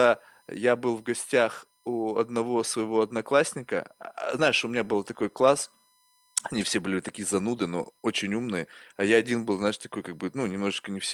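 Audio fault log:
Throughout: USB whine. A steady, fixed-pitch tone sits under the speech at 1 kHz, its strongest component also at 1 kHz, roughly 40 dB below the signal. This is the USB bus's 1 ms frame rhythm: the device pulls current in bursts every millisecond, and that periodic draw leaks into the audio path through shared power or ground. Because the frame timing never changes, the whine holds one constant pitch rather than wandering.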